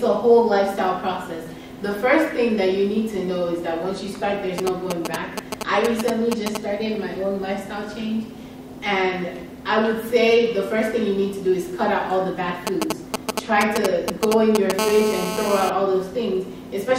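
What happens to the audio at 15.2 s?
A nearby 2G handset on a call pulses its transmitter about 217 times a second, and the audio circuitry rectifies those bursts. From 14.79 to 15.70 s this GSM phone buzz sits steady, a harsh, raspy 217 Hz drone rich in harmonics, only about 4 dB below the signal.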